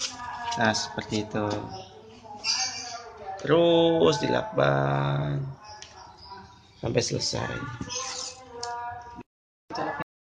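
At 10.02 s the audio has a cut-off end: the final buffers never reached the output, so the sound halts mid-event and falls straight to digital silence for the last 0.37 s. The waveform shows an abrupt drop to a flat line, and the spectrogram a sharp vertical edge with no decay tail.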